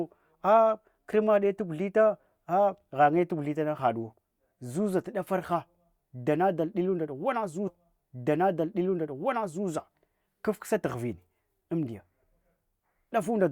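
At 7.67 s the speech jumps back with a brief blip, and the preceding stretch plays a second time, running until 9.67 s before the programme carries on from where it left off. That is a stream segment repeated: the player fetched or queued the same two-second chunk of the stream twice, so 2.0 s of already-heard audio is inserted into the timeline, and the seam where playback restarts produces the small click-like discontinuity.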